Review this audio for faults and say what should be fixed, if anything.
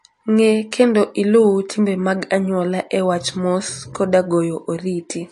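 Throughout the speech there is a watery, swirling quality with smeared consonant attacks, likely from MP3 compression at a low bitrate, which fits something around 48 kbps. Starved of bits, the encoder has removed everything above 11.3 kHz and dropped weak frequency lines that flicker between frames. A spectrogram shows a flat ceiling at 11.3 kHz and speckled holes blinking in the upper bands; the waveform looks ordinary. Keep a lossless master or encode at a much higher bitrate.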